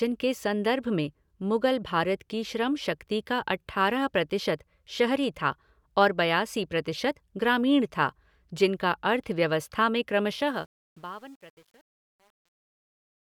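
From 10.32 s to the end at 13.40 s, the speech fade-out shows truncation distortion on a fade. The level falls smoothly, but too few bits survive, which fits roughly 9-bit resolution without dither. From 10.72 s the tail turns gritty.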